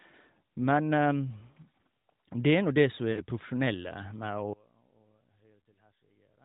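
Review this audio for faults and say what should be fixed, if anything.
Lost AMR speech frames at 3.12 to 3.23 s: about 40 ms fails, fitting two 20 ms frames. The decoder repeats the previous frame's parameters with falling gain, causing a brief drawn-out dip. Prevent this with stronger channel protection or retransmission on the radio link.

One channel inverted, likely, from 4.53 s to the end: the level drops by about 28 dB as the centred content cancels in the mono sum, leaving a faint residue. Prevent this by checking channel polarity before any stereo-to-mono downmix.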